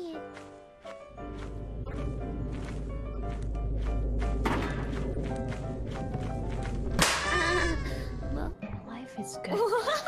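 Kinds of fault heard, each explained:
corrupt frame decoded: Flipped bits inside compressed frames reached the decoder, which played them anyway and put energy at the wrong frequencies. This causes three brief glitches, near 1.84, 3.13 and 5.13 s, each spanning one to four frames and peaking around -25 to -30 dBFS.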